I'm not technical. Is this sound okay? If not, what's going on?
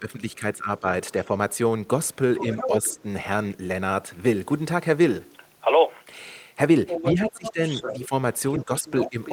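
No. First, speech suppressed in double talk: when both sides talk at once, the call's echo canceller has likely mistaken this talker for echo and turned them down. The voice dips from the start to 1.3 seconds, briefly around 2.7 to 3.0 seconds, and more deeply from 7.1 seconds to the end.

Second, the other side's voice leaking through: the echo canceller has likely failed to fully remove the far caller's voice, played from this talker's loudspeaker, from what the microphone picked up. A quieter second voice sits under the talker from 2.1 to 3.0 seconds and from 6.9 seconds to the end.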